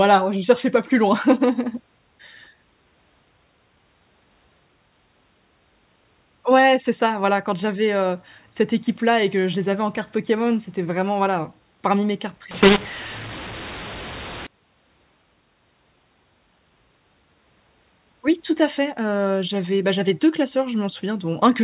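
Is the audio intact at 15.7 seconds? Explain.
Yes, at 15.7 seconds the speech is intact, carried cleanly through its G.711 telephone coding with no dropout, click or distortion.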